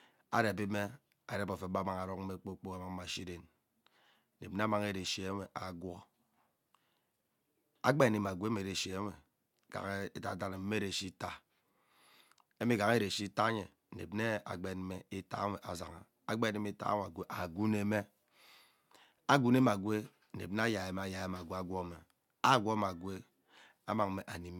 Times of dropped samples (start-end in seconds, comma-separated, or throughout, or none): none